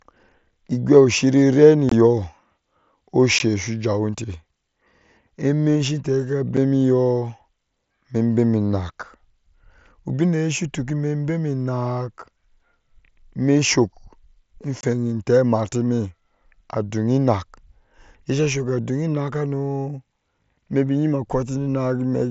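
Unconcealed Bluetooth headset packet loss drops voice packets on the mSBC link, leaving brief, abrupt-edged holes in the speech at 1.89–1.92, 3.39, 6.57 and 14.81–14.83 s.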